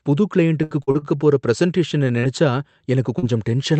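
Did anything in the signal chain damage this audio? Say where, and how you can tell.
Yes. Network stage: repeated packet loss (robotic sound) from 0.63 to 1.05 s, four concealed gaps up to 70 ms, filling almost half the span. A spectrogram shows smeared, repeated harmonic blocks.

Short concealed packet loss at 2.19 to 2.26 s and 3.19 to 3.25 s. Roughly 40 ms was lost each time and extrapolated from preceding sound. A spectrogram shows brief frozen, blurred bands.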